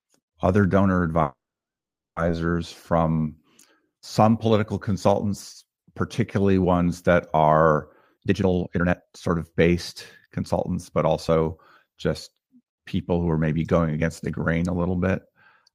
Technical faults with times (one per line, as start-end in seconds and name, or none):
1.21-2.18 call audio freeze
8.02-9.68 jitter buffer speed-up
10.26-11.56 jitter buffer speed-up